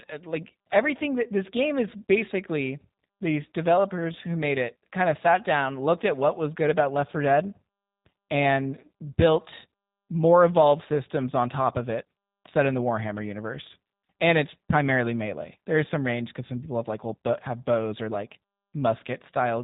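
Throughout the clip, the speech has passed through a G.729 codec, at a rate that fits 8 kbit/s. The codec discards the signal and resynthesises it from a vocal tract filter, pitch prediction and a few pulses per frame, leaving plainly audible roughness, a synthetic buzz and nothing above 4 kHz.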